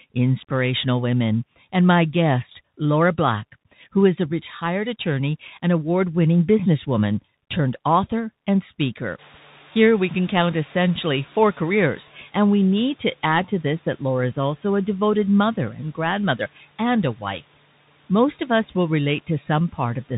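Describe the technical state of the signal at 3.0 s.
At 3.0 s the speech passes through a Bluetooth CVSD headset codec, as it does throughout. Its narrowband one-bit slope coding removes everything above 4 kHz, leaving scratchy sibilants and granular hiss.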